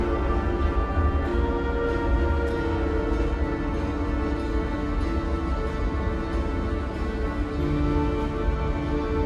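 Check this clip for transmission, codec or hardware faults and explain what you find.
I found no faults in the clip.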